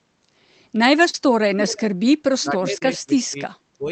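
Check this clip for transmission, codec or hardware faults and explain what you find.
Three kinds of fault are audible in this speech clip, on top of the call codec, which keeps content below roughly 8 kHz.

Short concealed packet loss occurs at 1.09–1.15 s, where about 40 ms of audio was synthesised, and at 2.79–2.83 s, where about 13 ms was filled in a 20 ms gap. The decoder extended the preceding sound to cover missing packets, then crossfaded back. Each sounds like a brief smear or wobble. A spectrogram shows harmonics frozen flat or blurred for those few milliseconds, and the waveform shows a repeated, slightly too regular cycle.

An echo leak appears at 1.6–1.8 s and again at 2.46–2.51 s. It is a delayed copy of the speech arriving 324 ms late, about 10 dB and then about 15 dB below the direct signal. It is likely residual loudspeaker pickup that the far end's echo canceller failed to remove. 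It sounds like a faint ghost trailing the speech. On a spectrogram, a weaker duplicate of the harmonic pattern appears shifted right by a third of a second.

Speech suppressed in double talk spans 2.43–3.40 s, affecting roughly 0.7 s in total with drops of around 20 dB, and recurs at 3.77–3.91 s with about 15 dB of attenuation over roughly 0.15 s. The likely cause is an echo canceller that, while both sides spoke, could not tell its talker from the echo and turned everything down. The speech dips. The waveform envelope sags in chunks, and the spectrogram shows energy fading out in patches.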